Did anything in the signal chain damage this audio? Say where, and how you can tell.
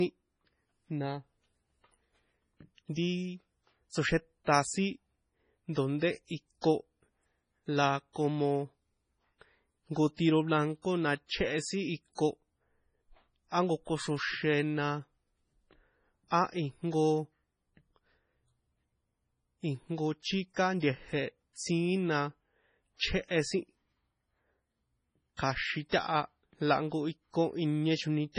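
Yes, at the codec stage, across the whole speech clip. Nothing is heard above 10.4 kHz, a hard ceiling on the treble. The sound is watery and swirly, s sounds chirp metallically, and attacks smear. The damage is heavy. This is likely MP3 compression at a low bitrate, which fits around 24 kbps. Short of bits, the encoder cut the top band and dropped weak frequency lines. Those lines flicker on and off between frames, which causes the swirl.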